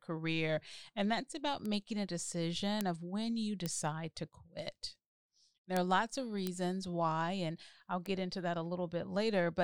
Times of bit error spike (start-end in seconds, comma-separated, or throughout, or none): 1.65, 2.81, 3.66, 5.77, 6.47, 8.06